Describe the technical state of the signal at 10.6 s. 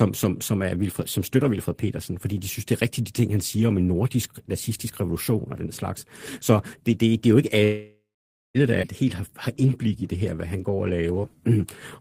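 At 10.6 s the speech sits inside a jitter buffer slow-down running from 9.05 to 11.58 s. The receiver repeats single pitch periods to rebuild its reserve. Playback drops to about 90 percent speed at unchanged pitch, stretching sounds and adding 260 ms overall.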